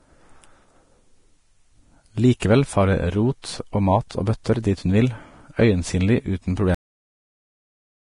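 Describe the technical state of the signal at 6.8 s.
At 6.8 s the signal is dead: a cut-off end begins at 6.75 s, right after "hun vil øyensynlig uten", and lasts to 8.04 s. The final buffers were never written, so the speech stops mid-sound and drops straight to digital silence with no decay. A fade-out would taper, and a dropout would resume.

The speech just before this point carries heavy Vorbis compression, likely at a low bitrate around 32 kbps. There is nothing above 10.5 kHz, and the coarsely quantised treble turns into grainy hiss over a smooth spectral floor. That hiss, rather than a clean dull band-limit, separates it from simple low-pass filtering.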